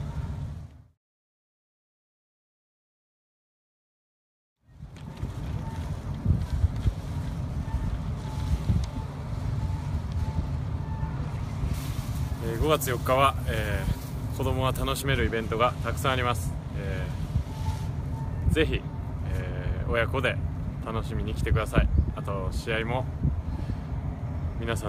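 From 11.74 to 15.02 s the sound turns thin, bright and sibilant: pre-emphasis left on, a 50 µs treble boost never undone, lifting 10 kHz about 11 dB.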